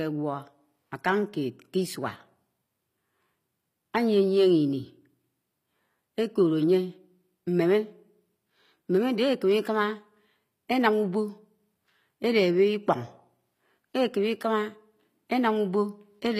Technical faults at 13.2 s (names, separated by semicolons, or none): HE-AAC compression